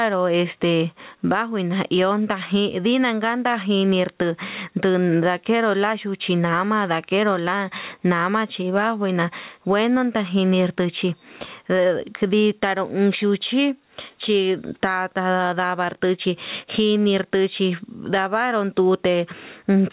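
Gain pumping runs through the whole clip, with the level swinging by something like 15 dB. Loud and quiet moments sit squashed close together. The likely cause is the input gain set far too hot, with a fast limiter or compressor clamping it on each loud syllable. Heard over the narrowband call path, nothing above 4 kHz gets through.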